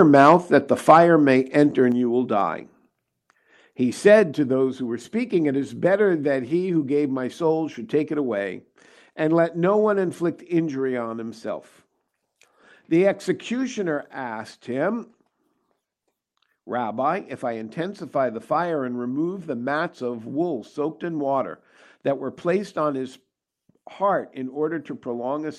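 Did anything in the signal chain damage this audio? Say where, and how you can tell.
Yes. From 0.0 to 0.34 s and from 0.88 to 0.98 s, the loudest syllables turn harsh and crackly. The waveform shows flat-topped peaks on a small share of samples, and a spectrogram shows broadband smearing. This is likely microphone overload, about 4 dB past the converter's limit.

At 0.91 s and 4.2 s, the whole level, background included, drops abruptly by about 2 dB and then about 4 dB, leaving a clean step in the waveform envelope. Call processing likely reacted to the clipping by stepping the microphone volume down.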